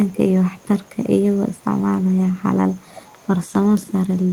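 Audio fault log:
0.06–4.32 s, echo leak in four stretches (0.06–0.18, 0.51–1.65, 2.03–2.43 and 2.75–4.32 s): a faint copy of the speech trails the original by about 287 ms, and by about 325 ms in the last stretch. It sits roughly 25 to 35 dB below the speech, faintest in the middle two. It is likely a far-end loudspeaker whose echo canceller let part of the microphone pickup return down the line.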